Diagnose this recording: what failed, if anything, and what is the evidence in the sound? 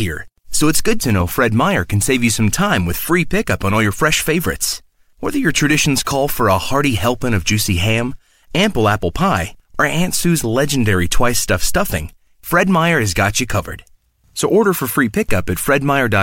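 Nothing failed: the recording shows no fault, and there is no evidence in the sound of one.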